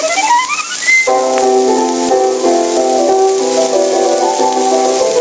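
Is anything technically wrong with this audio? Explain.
Yes. Gain pumping runs through the whole clip. The level is pulled down under each loud sound, a swing of around 10 dB. This is likely too much input gain with a fast limiter pulling the level down on every peak, which leaves the sound squashed. The band stops at 8 kHz, as expected from the call's G.722 path.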